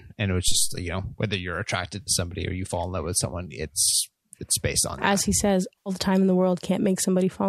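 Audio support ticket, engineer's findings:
Phantom power thump, 0.48–0.86 s: supply switched on or off on a live mic input; the step passes through the coupling capacitors. Deep low thump after "and it was", decaying in about 86 ms, gone before "know whether you're attracted".

AAC frame loss with concealment at 2.01–2.11 s, 3.91–3.94 s and 5.80–5.90 s. Lost spans of 60, 20 and 80 ms fit whole 10 ms frames of the low-delay AAC path, likely AAC-ELD. The decoder rebuilds each gap from the last good spectrum, producing brief smeared, noisy or phasey patches. These fall after "in love with someone" (before "it's based on") and after "that he says" (before "the time in the").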